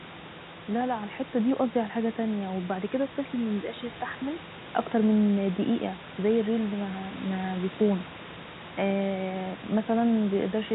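Nothing in this speech recording stood out as a technical problem on listening.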